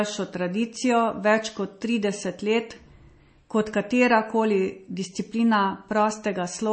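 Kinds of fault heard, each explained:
MP3 compression: there's nothing above about 8.3 kHz, and the speech has a watery, swirly quality where weak detail flickers in and out from frame to frame. That's plainly audible damage. It's likely down to a low-rate MP3 encode, around 32 kbps, starving the encoder of bits.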